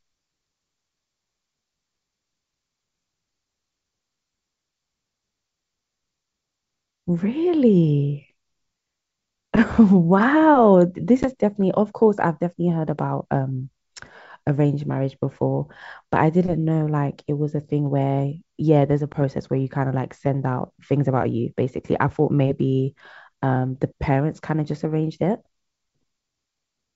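Speech over a wideband call, with clear sound up to about 7 kHz and faint upper-band hiss from the G.722 coding. There is packet loss on an ADPCM call at 11.23 to 11.28 s and at 19.13 to 19.16 s. Each drop is a hard-edged silent gap of about 10 ms, which fits a single lost packet. The decoder's predictor and step size then drift from the sender's. So the sound returns with brief distortion before settling.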